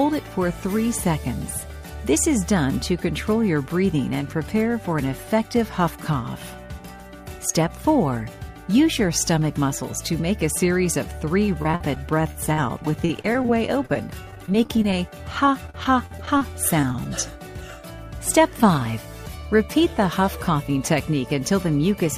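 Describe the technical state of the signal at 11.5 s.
At 11.5 s the signal is at the start of a stretch of repeated packet loss (robotic sound), running from 11.46 to 13.96 s. Packets go missing again and again, 18 times across that span. Each hole is filled by stretching the last sound, and the longest gap is about 46 ms. Patched material makes up about 15% of the stretch. The result is choppy, robotic audio with small pieces lost.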